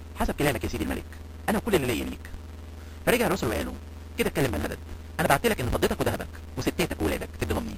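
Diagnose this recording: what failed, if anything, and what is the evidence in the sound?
Buffer stage: block size mismatch (truncated), throughout. A 138 Hz buzz. Sound runs 1.6 times fast at normal pitch, fitting 512-sample blocks losing their ends.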